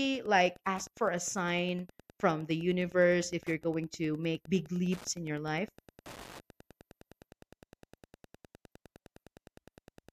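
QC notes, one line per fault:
Throughout, Wi-Fi interference: ticks every 102.4 ms, about 25 dB below the speech, from a nearby radio's rectified beacon, far slower than GSM buzz.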